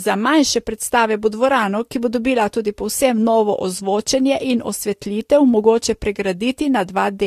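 Throughout the speech, the top end stops dead at about 14.1 kHz, and two textures of coding damage sit on top of each other. That layered character is the sign of transcoding between lossy codecs. The sound likely passed through a Vorbis encode near 50 kbit/s and then an AAC-LC encode around 64 kbit/s. The second codec spent its bits re-encoding the first one's artefacts while adding its own, and the band limit survived.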